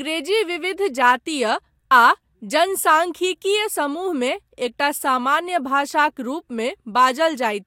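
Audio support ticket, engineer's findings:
Listened to the speech recording in full; nothing stood out as a problem.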